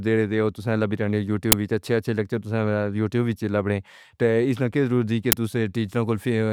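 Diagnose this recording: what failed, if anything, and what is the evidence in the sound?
An uninitialised buffer reached the output twice at the driver or buffer stage: a 10 ms block played before any audio was written to it, so leftover memory became samples. Each produces a short, loud crack, at 1.52 s and 5.32 s, the second just after "لکی ضرور دی کہ".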